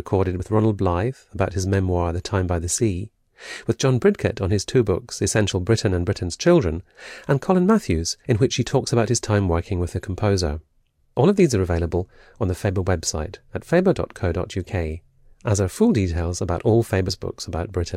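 Speech with compressed frames skipped twice, at 0.39 s and at 17.08 s just after "full details about all". Each time about one frame, roughly 20 ms of audio, goes missing. The audio jumps ahead rather than leaving the silent gap of a sample dropout.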